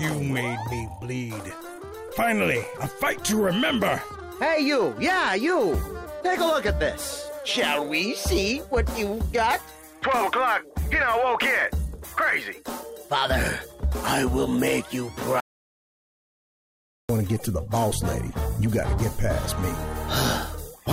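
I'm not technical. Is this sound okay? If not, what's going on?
No. From 15.40 to 17.09 seconds the sound cuts out completely: an audio dropout to silence lasting about 1.7 seconds, with no background noise at all. The input was likely lost briefly, and whatever happened during that gap is gone.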